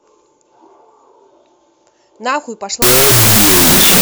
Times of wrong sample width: 2.82-4.01

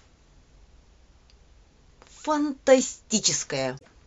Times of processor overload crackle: none

